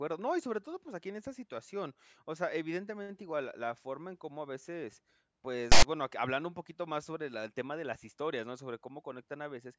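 Speech with one fault, file tags played as audio: between "cómo a veces pues" and "bueno que hablando un", 5.72 to 5.83 s brings a hard-edged, lopsided rasp. Text bytes read as samples give this offset buzz, not the even full-scale hiss of compressed data.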